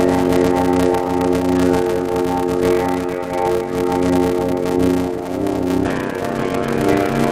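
A block size mismatch (padded) runs throughout the music. Zero-filled gaps in each block, which fits a 512-sample read, cause a 93.8 Hz buzz and 0.625× speed at about normal pitch.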